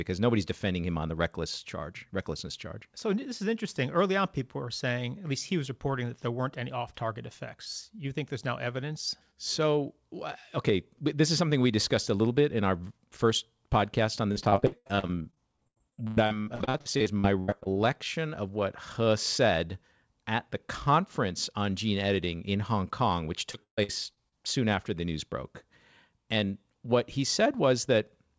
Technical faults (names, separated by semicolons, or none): repeated packet loss (robotic sound)